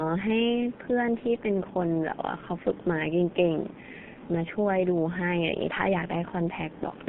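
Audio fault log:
Throughout: G.723.1 codec. The speech is muffled and hoarse, with smeared consonants. Nothing passes above about 3.4 kHz or below 150 Hz. The voice model updates only every 30 ms frame. The heavy damage fits a low-rate stream near 6 kbit/s.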